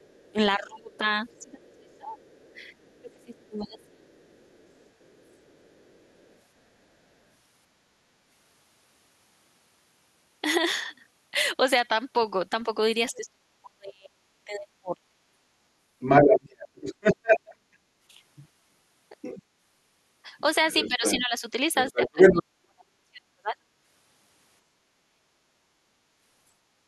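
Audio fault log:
0.00–7.15 s, other side's voice leaking through: a faint second voice sits far below the talker, likely loudspeaker echo that the canceller left in the microphone signal.
0.32–4.07 s, speech suppressed in double talk: the talker dips in pieces, by about 25 dB at worst, over roughly two seconds in total, likely because the canceller turned down both overlapping voices.
13.11–15.21 s, speech suppressed in double talk: the talker drops away in pieces, by about 35 dB at worst, for roughly one and a half seconds, likely because the canceller muted the overlap.
15.99–19.43 s and 20.38–22.43 s, other side's voice leaking through: a second voice comes through about 5 dB louder than the talker, likely far-end echo that the canceller failed to remove.
20.88–23.56 s and 24.89–25.80 s, speech suppressed in double talk: the talker falls away by about 40 dB, for roughly 1.5 s and then 0.7 s, likely because the canceller cut both sides while they overlapped.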